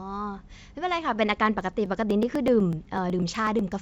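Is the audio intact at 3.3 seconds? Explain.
No. At 3.3 seconds the speech falls inside a run of periodic USB or driver dropouts lasting from 1.61 to 3.72 s. Something blocks the audio stream every 0.124 s, and roughly a millisecond of sound is skipped each time. The result is a regular ticking over the speech, about eight per second.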